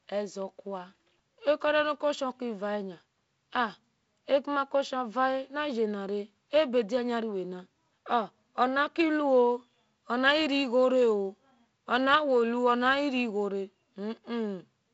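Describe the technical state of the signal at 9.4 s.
At 9.4 s the speech is intact, carried normally by G.722 wideband telephone coding at 48 kbit/s, with nothing above about 7.7 kHz.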